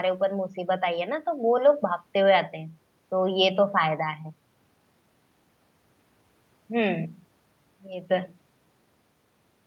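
No technical faults can be heard anywhere in this recording. The speech runs without any break, glitch or disturbance from one end to the other.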